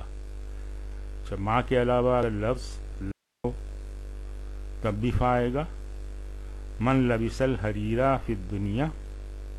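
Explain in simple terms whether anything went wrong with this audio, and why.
Something did go wrong, once. From 3.12 to 3.44 seconds, the sound suddenly cuts out for about a third of a second. This is an audio dropout to a faint residue. The gap is not silent. It holds only a soft hiss, far quieter than the sound around it. The cut starts and ends abruptly, not like a natural pause or fade. The likely cause is that the signal was briefly lost while the recording path stayed switched on.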